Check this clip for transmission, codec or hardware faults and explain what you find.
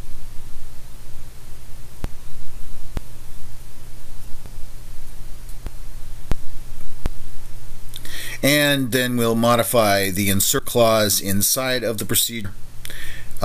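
The clip has repeated dropped buffers (overrun), most likely from the capture software failing to read incoming samples before the hardware overwrote them. Each discards a piece of audio and butts the two sides together, so there is no gap, only a forward jump, at 2.04, 2.97, 4.46, 5.67, 6.32, 7.06, 10.59 and 12.45 s. Most skip about a tenth of a second; roughly 0.2 s vanishes at 5.67 s and about 0.3 s at 2.97 and 12.45 s.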